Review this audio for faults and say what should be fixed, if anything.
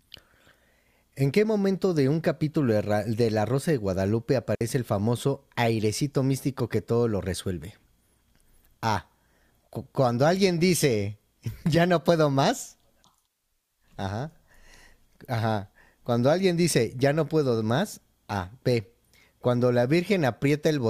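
Digital wireless dropout, 4.55 to 4.61 s: lost link data made the receiver mute for 60 ms, a flat waveform gap and empty spectrogram column. Keep clear line of sight between transmitter and receiver, with fresh batteries and a free channel, to keep the link stable.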